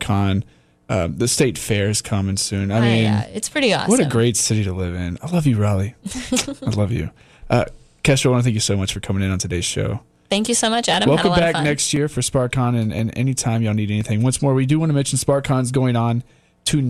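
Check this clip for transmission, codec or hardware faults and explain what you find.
One fault is present. Periodic USB or driver dropouts, 8.90 to 14.01 s, after "thank you so much": every 1.02 s the blocked bus skips about a millisecond, heard as evenly spaced ticks.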